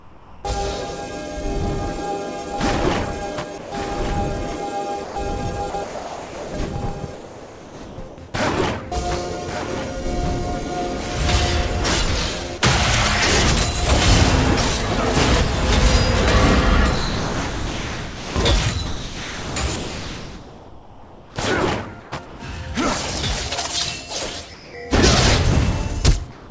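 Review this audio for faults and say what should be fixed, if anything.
Comfort noise in place of the background at 0 to 0.44 s, 24.54 to 24.74 s and 26.32 to 26.50 s: the real room tone turns into flat, featureless hiss about 3 to 4 dB quieter, likely discontinuous transmission filling pauses with synthetic noise. Keeping DTX off, or tuning the comfort noise level to match the real background, would hide these.

There's a doubled audio track from 2.27 to 11.67 s. A full-band copy trails about a second behind, roughly 10 dB down, with no room colour, and cuts in and out abruptly. It's likely a second, slower capture path mixed in. Make sure only one capture path feeds the mix.

Sound dropped by the voice detector at 3.58 to 3.72 s (140 ms gone) and 12.58 to 12.62 s (40 ms): brief bits of sound vanish into steady noise, likely because the detector took them for background. A lower detector threshold or longer hangover would prevent this.

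Sound chopped by the voice detector from 5.04 to 8.18 s and 16.96 to 22.40 s: the audio keeps cutting to comfort noise and back, likely from the detector toggling repeatedly. More hangover time, or disabling the detector for this source, would fix it.

Nothing comes through above about 8 kHz, which fits the G.722 call path the audio went through, and that's expected rather than a fault.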